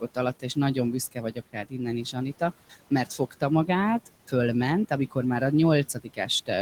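Noise suppressor artifacts run through the whole recording. The suppressor pulls down, frame by frame, every band it judges to be steady noise, cutting the room noise (sitting about 18 dB below the speech) by about 17 dB. As a result the background dips away in the gaps and swells back beneath the speech.

Speech cut by the noise suppressor occurs three times, where the suppressor mistook parts of the speech for noise and turned them down along with the background. Between 1.11 and 1.74 s, roughly a third of a second in total is pulled down by as much as about 18 dB. Between 3.06 and 3.42 s, around a tenth of a second drops by up to about 16 dB. From 5.94 to 6.28 s, right after "amikor már a", another brief stretch of about a tenth of a second sinks by up to about 14 dB. In each place, the affected speech sounds swallowed or faint.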